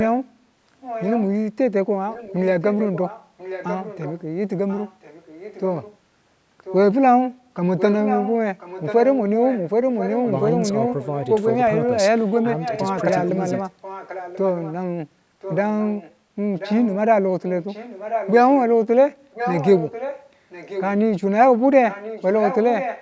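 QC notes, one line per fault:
0.8–1.25 s, 2.1–5.96 s, 6.64–6.76 s, 7.77–14.74 s, 15.41–18.6 s, 19.32–20.92 s and 21.89 s to the end, echo leak: a second, fainter copy of the speech trails the original by about 1.04 s. It sits roughly 10 to 15 dB down, a bit louder in some stretches than others. The likely cause is a far-end loudspeaker feeding back into that side's microphone, with its echo canceller letting part of it return to us.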